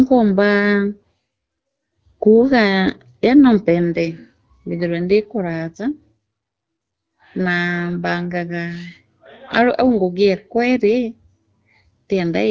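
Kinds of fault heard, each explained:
No kinds of fault can be heard in the speech. It has passed through call microphone processing and an AMR wideband (HD Voice) codec at 12.65 kbit/s, which leave nothing above 8 kHz and only light coding traces.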